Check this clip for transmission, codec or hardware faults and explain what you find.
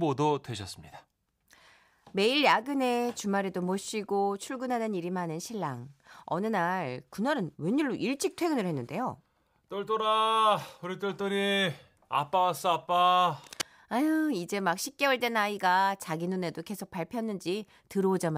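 One hardware fault can be heard: a brief burst of cable scratch noise from 13.44 to 13.63 s. For just under a fifth of a second, dense, ragged crackle sits over the speech at roughly 10 dB below it, heard as scratching or rustling. The likely cause is a worn cable, connector or control being moved, so its contact resistance jumps about rapidly and modulates the signal. A single digital click would be one sharp impulse; this is an uneven cluster of bursts that lasts.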